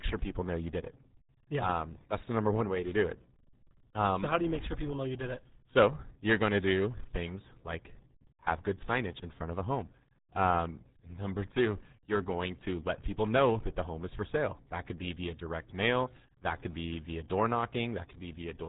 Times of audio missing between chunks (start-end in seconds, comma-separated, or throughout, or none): none